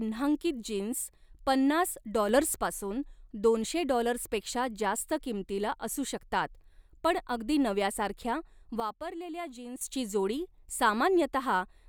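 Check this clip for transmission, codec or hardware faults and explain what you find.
Two sudden gain jumps. After "जीन्स पन्नास", from 2.29 to 2.56 s, speech and background noise rise together by about 5 dB. After "शकतात पण अगदी नव्यासारख्या", from 8.8 to 9.81 s, both fall by about 11 dB. The likely cause is a digital gain change applied instantly, without a ramp.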